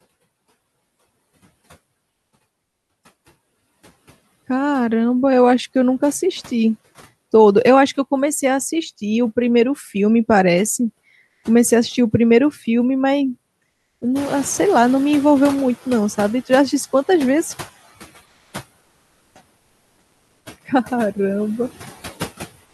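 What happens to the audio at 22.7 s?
From 22.65 to 22.74 s the real background is replaced by comfort noise, a steady, featureless noise about 3 dB quieter. The likely cause is Opus DTX: the sender stops transmitting and the receiver generates this stand-in noise. Unlike the noise suppressor artifacts, which pump the actual background up and down, this is a flat, detail-free substitute.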